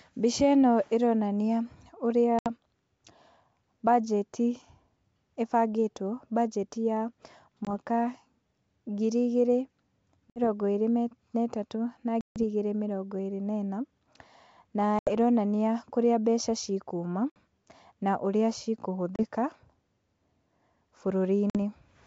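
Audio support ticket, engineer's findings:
Hard-edged dropouts to silence, each followed by slight roughness that settles within tens of milliseconds. Packet loss on an ADPCM call. Gaps at 2.39 s (70 ms), 7.65 s (20 ms), 10.30 s (60 ms), 12.21 s (150 ms, the longest, between "ĩrĩ na ĩtatũ na" and "igĩrĩ mĩrongo ĩrĩ na"), 14.99 s (80 ms, just before "ĩronania kũrĩa mbeca ci"), 17.30 s (60 ms, right after "kũrĩa mbeca ci kuma"), 19.16 s (30 ms) and 21.50 s (50 ms). The other gaps span about 2 to 7 packets, and the 12.21 s gap spans well over ten. Lost frames are zero-filled, so the receiver's adaptive predictor and step size lose track of the sender's. That mismatch produces the roughness on return until the two re-converge. The G.722 wideband path is clear up to 7 kHz with only faint upper-band hiss, consistent with full-rate coding.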